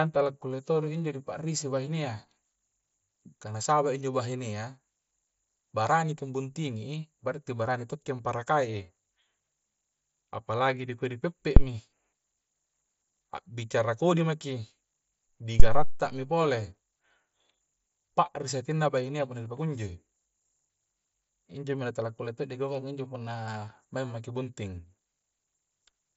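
Speech heard through a Bluetooth mSBC headset link, with nothing above about 7.7 kHz, carries two phantom power thumps, at 11.57–11.66 s and 15.60–16.08 s. Each is a supply step hitting the input's coupling capacitors. Unlike a handling bump or plosive, it is a clean, pitchless low thud with a smooth exponential decay, about 21 ms and then 109 ms long.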